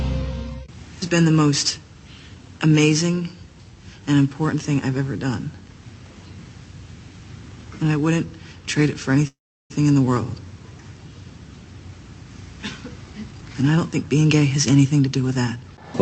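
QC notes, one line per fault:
9.27–9.72 s, call audio freeze: the sound gives way to a brief buzzy continuation that fades into about 350 ms of silence, then resumes exactly where it stopped. This adds a 0.43 s gap and loses nothing, likely because delayed packets emptied the jitter buffer. The waveform shows a decaying tail then a flat line, and the spectrogram a smeared band fading to blank.
13.32–15.84 s, jitter buffer speed-up: the audio plays at 116% speed with unchanged pitch and sounds hurried. To shrink an overfull buffer, the receiver repeatedly cut short pitch-period pieces, roughly 0.4 s in total. Spectrogram harmonics keep their spacing while events crowd closer in time, and the waveform shows small splice joins.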